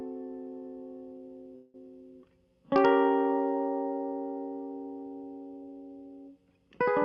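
At 1.55 s the music stalls into a decaying buzz that lasts until 1.76 s, then resumes exactly where it stopped. This is a call audio freeze, likely from delayed packets draining the jitter buffer. About 187 ms of filler is inserted, nothing is lost, and everything after it runs 187 ms late. The call codec path limits the top end to around 12 kHz.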